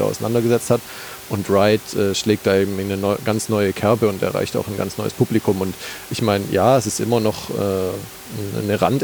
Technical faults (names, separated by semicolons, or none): none